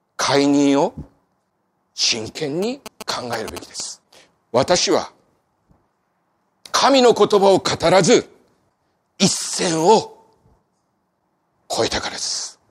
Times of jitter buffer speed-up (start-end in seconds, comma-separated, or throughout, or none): none